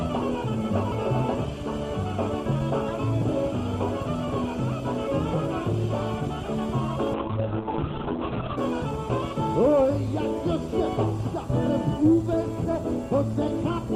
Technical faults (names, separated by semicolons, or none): call bitrate drop